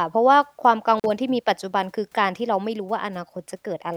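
A speech recording with an intermittent contact at 0.98 to 1.05 s: the signal drops out for about 43 ms, showing as a flat waveform gap edged by crackle spikes.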